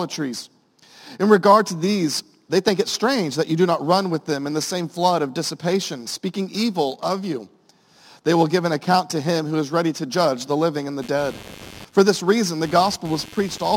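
From 11.02 s onward, a faint buzz pulsing about a hundred times a second: computer activity noise, as changing computer load shifts the circuit's shared ground.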